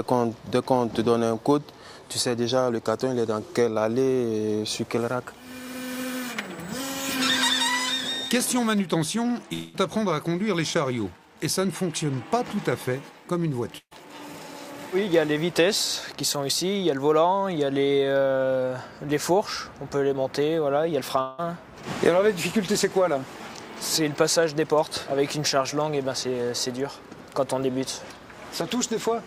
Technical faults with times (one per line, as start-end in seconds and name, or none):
9.53-9.76 long network dropout
13.78-13.93 burst of packet loss
21.21-21.40 long network dropout